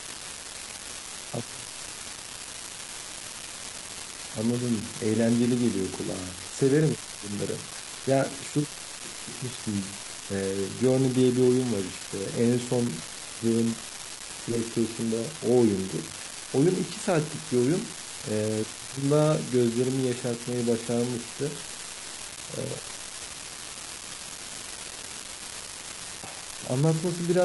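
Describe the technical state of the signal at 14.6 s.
At 14.6 s the speech carries an unreliable data bit, present throughout the clip. One marginal data line flips its bit at random. Each error adds a spike of identical size. The result is a steady crackle or fizz that continues through pauses.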